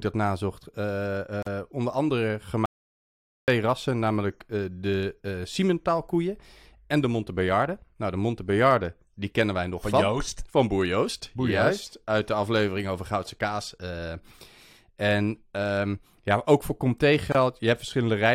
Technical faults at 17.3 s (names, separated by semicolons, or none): gap at a join of encoded pieces